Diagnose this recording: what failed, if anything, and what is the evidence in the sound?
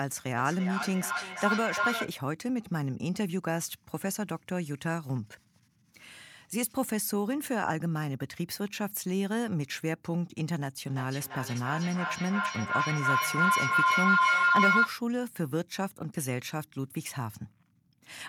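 Feedback howl, a failure in the acoustic loop that call processing should have broken: two devices in one room are sharing the call. From 0.37 to 2.19 s, and again from 10.9 to 15.01 s, a tone near 1.5 kHz swells, with the repeats roughly a third of a second apart, which is the loop's round-trip delay. It peaks about 1 dB above the speech the first time and about 6 dB above it the second. Plain echo would fade with each repeat. Here each pass through microphone and loudspeaker adds gain, so the repeats grow and narrow onto the frequency the room and devices favour.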